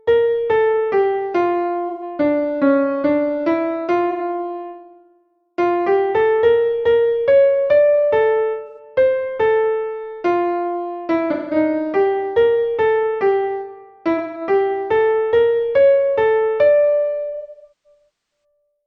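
AAC frame loss with concealment hits at 1.89, 4.10, 8.67, 11.32 and 14.17 s. Each gap of 85 to 170 ms gets patched from the last good spectrum, so it sounds smeared and phasey. From 17.30 to 18.44 s losses cluster, the longest about a third of a second, dipping toward silence.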